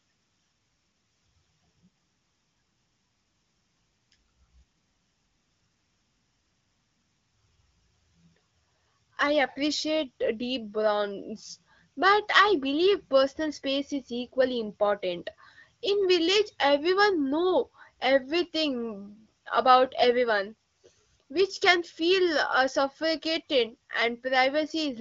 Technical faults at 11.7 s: none

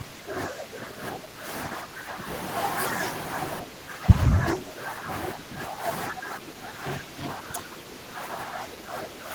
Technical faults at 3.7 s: speech suppressed in double talk

